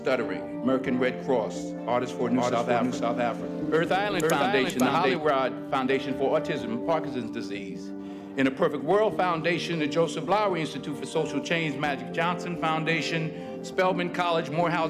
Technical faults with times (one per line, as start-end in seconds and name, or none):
2.20-5.16 doubled audio track